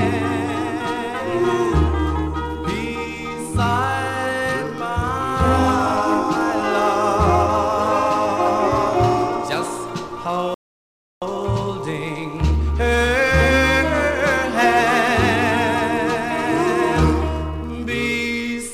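At 10.54 s the audio halts and stays silent until 11.22 s, a rebuffering stall that adds about 0.67 s to the playback. The player used up its downloaded data and had to wait for more before continuing. What separates this from a dropout or packet loss is that the sound picks up exactly where it stopped, with nothing skipped or truncated. The content is intact, only delayed, so the gap inserts time rather than removing any.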